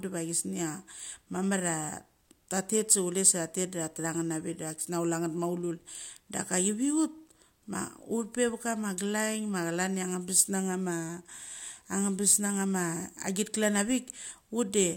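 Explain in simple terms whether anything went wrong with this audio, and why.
Nothing went wrong here; I listened all the way through this bit of speech and didn't hear a single glitch or hiccup anywhere.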